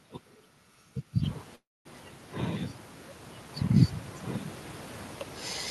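At 1.55 s the speech stalls in a call audio freeze lasting until 1.87 s. The last sound trails on as a fading buzz for a moment, then drops to about 0.22 s of near silence before the speech resumes where it left off, with nothing lost, only about 0.3 s of delay inserted. The likely cause is late packets draining the jitter buffer. A spectrogram shows a smeared, decaying band, then a blank gap above the room noise, which rises near 1 s.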